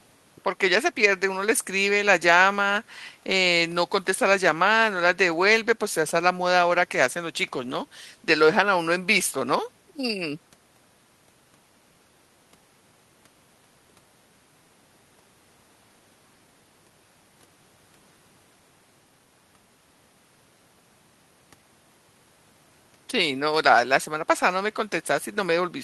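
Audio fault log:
Nothing to log here; I listened to the whole speech recording and didn't catch a single problem worth noting.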